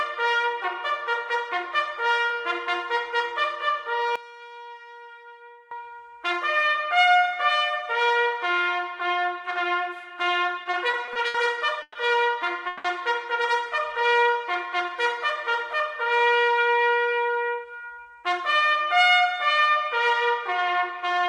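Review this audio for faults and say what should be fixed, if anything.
From 4.16 to 5.71 s the sound drops by about 20 dB, likely because one stereo channel has reversed polarity (one channel inverted), so the shared content cancels when the channels are summed to mono. Unlike a dropout, a faint difference signal remains. Check polarity on each channel before any mono fold-down.

Between 10.63 and 11.37 s there are repeated stalls (stutter): six brief holds, the longest 70 ms, together filling 170 ms, about a quarter of that span. The jitter buffer kept running dry while the last sound was stretched, and nothing is lost. Unlike a freeze, these are many short catches rather than one hold. Size the jitter buffer for the network's real delay variation.

Two call audio freezes follow. At 11.82 to 11.98 s, 130 ms of held, fading sound ends in 30 ms of silence. At 12.67 to 12.87 s, 170 ms is held without silence. 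Packets were likely held up in transit, and each freeze pushes the audio 130 or 170 ms later. Each is a single longer hold, not a stutter. Prioritise call traffic on congested links.

From 14.00 to 15.19 s there is a jitter buffer slow-down. Repeated pitch periods add 116 ms, so the sound plays at 91% speed. The pitch stays the same, which separates this from a tape-like slowdown that also drops the pitch. Let the buffer grow more gradually.

From 16.98 to 18.74 s there is a jitter buffer speed-up. Around 200 ms is removed in short pieces, so the sound runs at 113% speed and feels hurried at unchanged pitch. This is the counterpart of the slow-down, shedding a built-up backlog. Limit how fast the buffer drains after bursts of packets.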